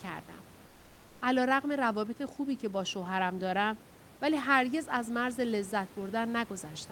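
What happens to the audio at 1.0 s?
Comfort noise in place of the background, from 0.67 to 1.19 s: the room noise in the pause gives way to a steady, featureless hiss about 2 dB quieter, likely because the sender stopped transmitting during silence and the receiver synthesised filler noise to cover the gap.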